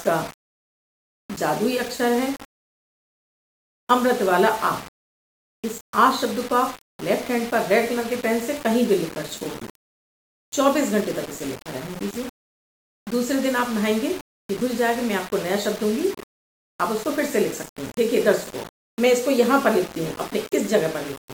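Throughout, the signal was likely rounded onto a coarse grid fitting 5 bits, without dither. This low bit depth without dither causes gritty distortion that tracks the sound, only around 20 dB below it.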